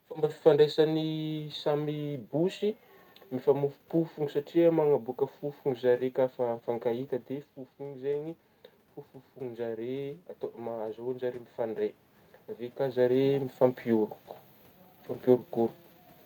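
From 9.34 to 11.91 s the automatic gain rising is audible. After the input fell by about 10 dB, the gain control slowly added about 4 dB. Voice and room noise swell together, unlike the talker moving near 7 s, where only the voice changes.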